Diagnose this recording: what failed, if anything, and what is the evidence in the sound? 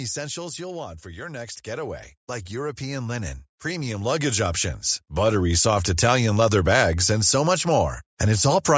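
Automatic gain falling in the call processing: from 0.05 to 1.09 s the speech and its background sink together by about 6 dB as the gain control judges the input too loud.

Automatic gain rising follows, also in call processing: from 1.02 to 5.85 s voice and background swell together by about 15 dB as the control finds the input too quiet.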